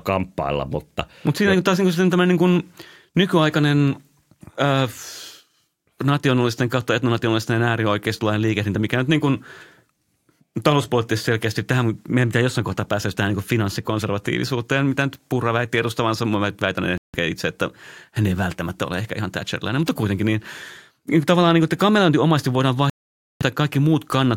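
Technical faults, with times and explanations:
16.98–17.16 s and 22.90–23.42 s, Bluetooth stall: The speech drops to silence for 0.16 s just before "itse että hän ei" and for 0.51 s just after "omasti voidaan", then picks up again. Interference likely held up packets, so the headphones' buffer ran empty and playback paused until the resent data arrived.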